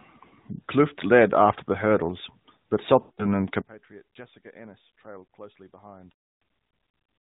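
Speech clip carried over a narrowband AMR mobile link, with lost AMR speech frames from about 3.00 to 3.26 s. The decoder stretches the last good frame and fades it, a gap that fits roughly nine 20 ms frames. A second frame-loss event at 6.12 s is longer, fitting about 300 ms of concealment before the signal returns rough. From 3.62 s to the end, the level collapses by about 24 dB and centred content nearly vanishes, leaving faint residue, likely one channel inverted and cancelling in a mono sum.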